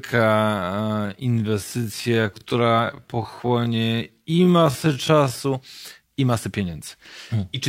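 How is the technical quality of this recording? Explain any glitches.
The recording has one clear fault. A time-stretched section runs from 0.0 to 5.38 s: the speech plays at about 0.54 times its normal pace, likely from software lengthening it by repeating short pieces to hold pitch. That makes it drag before the pace abruptly recovers.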